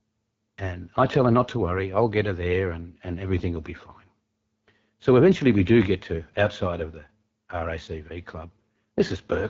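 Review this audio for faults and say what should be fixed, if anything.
The whole clip carries AMR wideband (HD Voice) codec damage: the speech sounds rough and raspy, which fits the 8.85 kbit/s mode. Set the encoder to 12.65 kbit/s or higher.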